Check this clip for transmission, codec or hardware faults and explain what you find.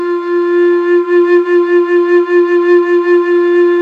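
I found no faults to explain in this music clip.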